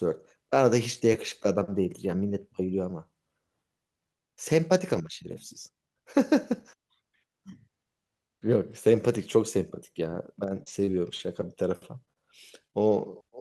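From 10.11 to 12.93 s the speech shows scattered short gaps: about seven brief packet losses, none longer than roughly 30 ms, totalling 140 ms missing. The receiver bridged each by extending the preceding sound, leaving small ticks, smears and hiccups within otherwise continuous audio.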